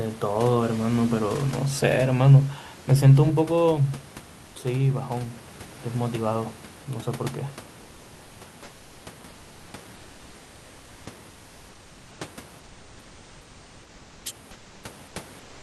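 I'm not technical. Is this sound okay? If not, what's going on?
No. Between phrases the real room background is swapped for comfort noise in place of the background: a steady, featureless, slightly quieter hiss at 9.31–9.67, 11.29–12.19, 12.61–14.23, 14.53–14.83 and 15.43–15.62 s. Unlike a dropout, the pauses never go silent. The likely cause is the sender pausing transmission when nobody talks.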